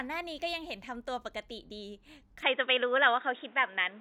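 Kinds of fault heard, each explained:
Input switched to a poorer device: At 2.43 s the speech abruptly turns dull and boxy, with nothing above 3.8 kHz, and stays that way to the end. There is no gap at the switch. The level shifts by around 5 dB and a new noise floor appears. A likely change of microphone or headset profile.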